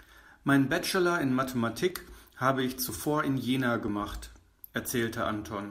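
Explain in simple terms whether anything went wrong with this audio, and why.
An overlap between stream segments occurred: the audio arrives in chunks about one second long, and their time stamps overlapped, so a sliver of real speech was trimmed away. That leaves small clicks or skips at 1.90, 2.89, 3.88 and 4.87 seconds.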